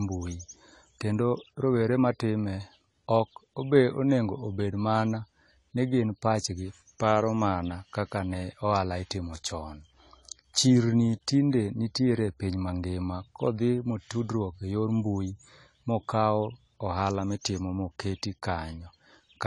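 A speech clip with AAC compression artefacts running through its whole length: the sound is dull, with nothing above 11.5 kHz, and sibilants and sustained sounds take on a smeared, warbling, fizzy texture. Unlike a simple low-pass filter, which only removes the top end cleanly, this dulling comes with holes and noisy fill inside the remaining spectrum, which is likely coarse quantisation by AAC-LC at a low bitrate, around 32 kbps.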